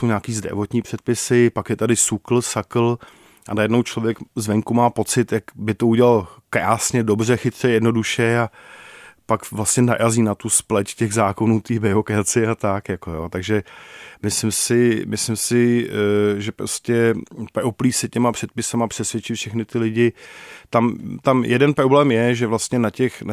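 No technical faults are audible anywhere in the recording.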